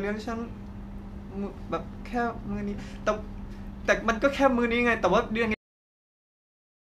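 The last stretch of buffers was never written out or played, giving a cut-off end at 5.54 s. Rather than winding down, the speech is chopped off mid-sound at that instant, with no decay or fade of any kind, and the signal falls straight to digital silence. That dead silence fills the remaining 1.4 seconds or so, so the final part of the utterance is simply missing instead of finishing naturally.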